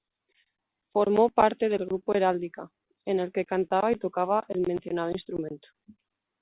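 No technical faults are audible.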